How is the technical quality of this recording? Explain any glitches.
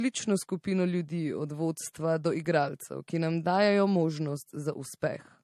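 The technical quality is compromised throughout the speech. The likely cause is transcoding between lossy codecs: a low-rate MP3-like encode, then AAC. The two sets of artefacts mix into swirly, smeared detail, and nothing remains above 13.2 kHz, a flat ceiling on a spectrogram.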